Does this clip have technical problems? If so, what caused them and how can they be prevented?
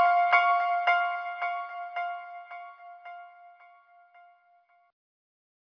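No, there are no technical problems to hear in this recording of sounds. Nothing here calls for a cause or a preventive step.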